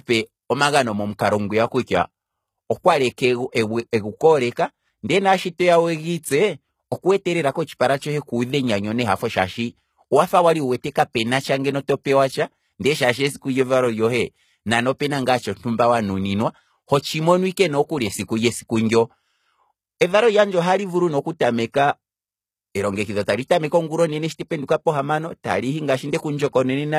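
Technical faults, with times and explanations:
Throughout, HE-AAC compression: the speech carries plainly audible codec damage, and nothing is present above 14.9 kHz. The treble sounds rebuilt, not captured. This is likely spectral band replication copying lower bands upward at a bitrate near 20 kbps.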